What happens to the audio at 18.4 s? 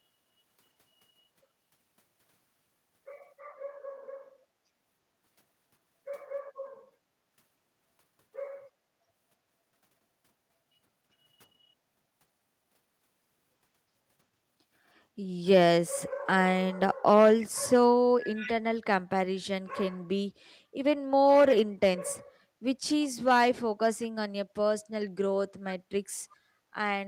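From 18.35 to 18.52 s a faint copy of the speech, roughly 15 dB down, repeats 337 ms late. This is an echo leak, likely loudspeaker sound slipping past an echo canceller. Unlike room reverberation, it is a distinct repeat, not a smeared tail.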